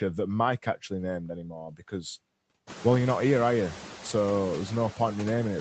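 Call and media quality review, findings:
Noise suppressor artifacts, whole clip: background pulled down about 15 dB between phrases, swelling back under speech. Spectrogram shows gated noise floor in the gaps. Component: noise suppressor applying frame-wise band gains.

Speech cut by the noise suppressor, 1.43–1.52 s and 1.69–2.04 s: soft speech sounds swallowed. The first dip is about 6 dB and the second is deeper, about 16 dB, roughly a fifth of a second. The waveform envelope sags and the spectrogram shows faded speech energy. Suppressor misread low-level speech as noise.

Lost packet rebuilt from error correction, 2.89–2.95 s before "you're not here are" and 4.05–4.11 s after "not here are you": 40 ms rougher, noisier patches with no gap, which fits two lost packets each, covered by Opus in-band FEC copies. Spectrogram shows smeared, grainier frames. Room noise rises near 2.5 s, and the band stops at 8 kHz, consistent with a 32 kbps wideband setting.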